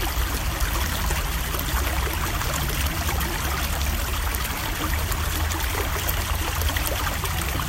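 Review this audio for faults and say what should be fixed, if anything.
Nothing needs to be fixed, as no faults can be heard in this audio.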